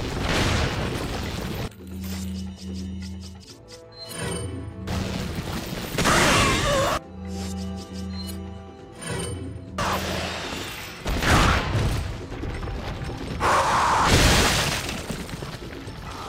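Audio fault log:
3.44 s, CD skip: a brief mute of a couple of milliseconds and a tick as the laser jumps tracks, and playback resumes elsewhere rather than simply dropping out.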